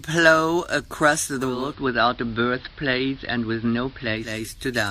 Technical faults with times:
1.37-4.49 digital radio blending to analogue

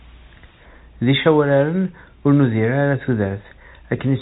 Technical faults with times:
none

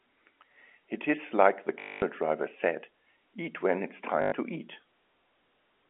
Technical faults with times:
1.80-2.02 packet loss with last packet repeated
4.22-4.32 packet loss with last packet repeated

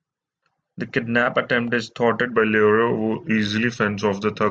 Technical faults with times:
2.32-4.51 wrong sample rate

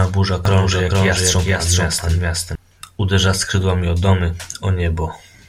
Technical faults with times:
0.45-2.55 doubled audio track

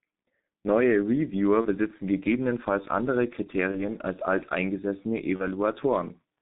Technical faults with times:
0.00-6.42 G.723.1 codec
1.61-1.67 VoIP packet loss concealed by the speech codec
3.71-3.78 VoIP packet loss concealed by the speech codec
5.36-5.48 VoIP packet loss concealed by the speech codec

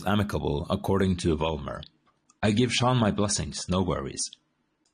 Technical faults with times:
1.02-4.94 adaptive stream at a lower bitrate

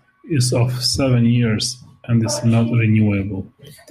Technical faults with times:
none

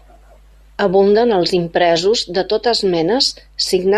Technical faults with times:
0.00-3.97 mains hum

